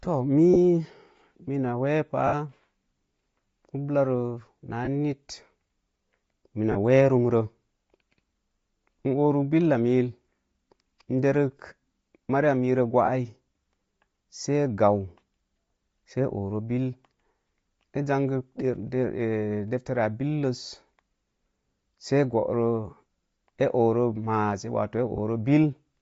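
Right from the start the speech has a breathy, grainy edge, with the top end thinned out and replaced by a hiss-like fizz. That's most likely Bluetooth LC3 compression at a low rate, around 32 kbps with 10 ms frames, where the codec drops much of the upper spectrum and fills the gaps with noise. The damage is plainly audible across the whole clip.

On top of that there are short dropouts from lost LE Audio frames. The first is at 0.54–0.57 s, a brief noisy smudge about the length of two 10 ms frames. The longest is at 2.27–2.34 s, about six frames' worth, where the sound smears and starts to fade before the signal returns. The others are at 4.85–4.88 s right after "ublarə naa", 6.72–6.77 s just before "wee rumro", 13.06–13.08 s after "mariya mero", and 25.16–25.18 s. In each gap the decoder keeps replaying the last spectrum with scrambled phase, so you hear a brief rough smear instead of a clean cut.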